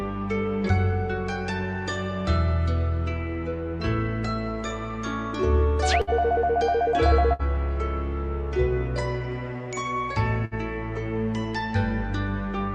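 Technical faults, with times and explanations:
6.01–6.10 s, 7.33–7.42 s and 10.45–10.54 s: burst of packet loss. Each time a run of packets never arrived in time, so the receiver extended the last sound and faded it for about 60 ms, then resumed with 60 ms of audio skipped.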